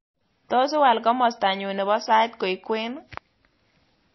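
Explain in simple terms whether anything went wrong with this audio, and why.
Throughout the speech, the treble stops sharply at 5.8 kHz, and the sound has a watery, swirly quality with smeared consonants. That points to likely MP3 compression at a low bitrate: short of bits, the encoder discarded the highest frequencies and flickered weaker detail on and off.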